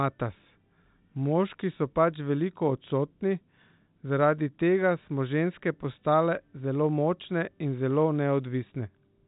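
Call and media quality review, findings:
No faults heard; G.711 telephone path sounds as expected.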